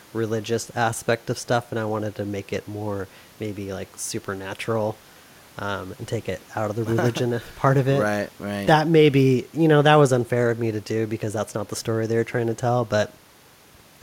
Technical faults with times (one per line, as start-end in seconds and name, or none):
none